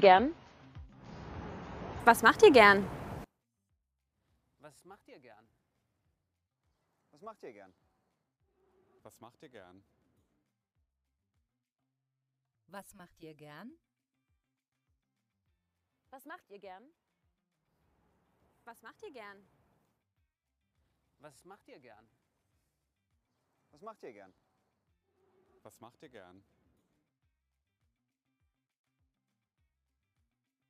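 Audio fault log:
0.0–2.0 s, adaptive stream starting at a low bitrate: For the first two seconds nothing is present above 7 kHz, and the coding grain is coarser, which points to an AAC-LC rendition of around 24 kbit/s chosen so playback could start quickly before the connection had been measured. At 2.0 s the player moves to a higher rendition, consistent with roughly 96 kbit/s. The treble and clarity then return at once, with no break in the sound.
3.24–30.70 s, one channel inverted: From 3.24 s to the end the level falls by about 30 dB, and most of the sound collapses to a faint remainder. This is likely one stereo channel with reversed polarity being summed to mono. Whatever the two channels share cancels almost completely, so centred content nearly disappears. Only the difference between left and right survives.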